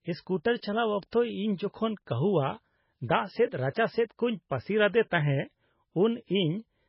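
Throughout, the speech has nothing above 5.5 kHz and sounds watery, with smeared attacks. Heavy MP3 compression is the likely cause, fitting a bitrate near 16 kbps.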